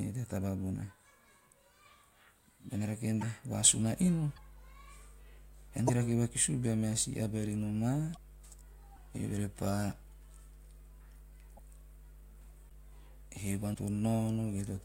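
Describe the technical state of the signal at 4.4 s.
At 4.35 to 4.38 s the speech briefly glitches and skips ahead. The likely cause is a broken MP3 bit reservoir: after a cut, frames read another frame's bytes.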